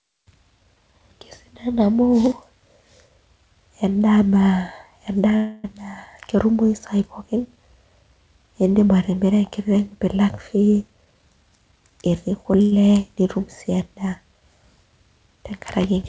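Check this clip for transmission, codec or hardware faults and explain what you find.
Three faults are audible, all from packet timing on a call link. The speech band stops at 8 kHz, which fits the G.722 codec at 64 kbps.

Call audio freeze, 5.36 to 5.66 s. The last sound is held for about 0.28 s as a fading buzz. The likely cause is delayed packets draining the jitter buffer. The receiver filled the wait. Speech then resumes where it stopped, so nothing is lost.

Jitter buffer speed-up, 10.88 to 11.82 s. The speech runs at 129% speed and sounds hurried. The pitch does not change. The buffer had built up too much audio. The receiver cut many short pitch-period pieces, removing about a third of a second in total.

Short stall from a late packet, 12.62 to 12.74 s. One packet arrived late and the buffer ran dry. The receiver stretched the last sound by 97 ms until it came. You hear a briefly held sound with a slight buzz. 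No speech is missing.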